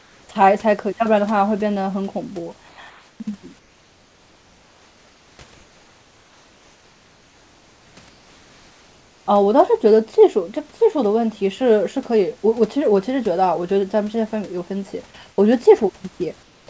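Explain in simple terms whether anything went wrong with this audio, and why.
Yes, something's off in the pauses: comfort noise in place of the background. At 0–0.29 s, 2.69–2.78 s, 2.90–3.20 s, 3.59–5.39 s, 5.54–7.97 s, 8.09–9.26 s and 16.43–16.67 s, the real room noise between speech turns into a flat, featureless noise, a touch quieter in most gaps. The likely cause is the sender going silent when it hears no speech, with the receiving end filling the gap with made-up noise.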